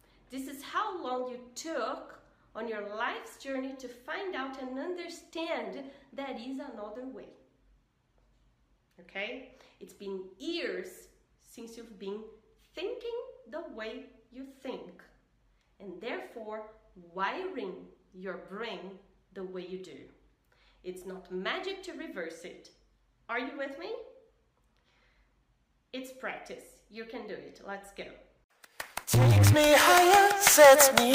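At 12.28 s there is a single sharp click. It sounds like dropped samples. A fraction of a millisecond is likely missing, so the waveform jumps straight to a later value. Nothing audible is lost. Only the tick remains, brief and bright.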